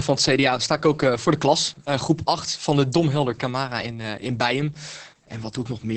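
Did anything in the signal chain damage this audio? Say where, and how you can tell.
Yes. The damage comes from the codec stage, Opus voice compression, and it lasts the whole clip. The speech is band-limited, with little real detail above 8 kHz. It sounds muffled, hoarse and slightly robotic. This points to Opus in SILK mode. SILK codes speech as a linear-prediction filter plus an excitation signal. Here the excitation is coded coarsely, which fits a bitrate near 10 kbps. That coarse coding gives the heavy, buzzy texture.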